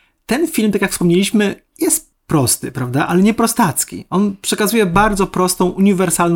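Speech recording with no audible technical faults anywhere in the clip.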